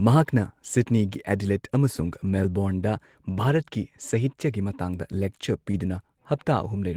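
From 1.93 to 2.31 s the speech turns grainy and noisy but never breaks. This is a lost packet rebuilt from error correction. A run of packets went missing, roughly ten by the sound of it, and the decoder played the low-bitrate copies carried in the packets that followed. The same rough, coarser texture returns from 4.09 to 4.19 s. Unlike concealment, nothing is guessed: the real sound is there, just at much lower quality.

From 5.71 to 5.75 s there is a short concealed packet loss. About 20 ms never arrived, and the decoder filled it by stretching out the preceding sound before blending back, which leaves a brief smear rather than a grainy patch. Its second half, 5.73 to 5.75 s, is instead a rebuilt error-correction frame, so the smear gives way to a moment of the same rough texture.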